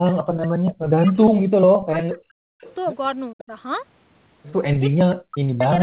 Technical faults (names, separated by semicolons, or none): speech suppressed in double talk; echo leak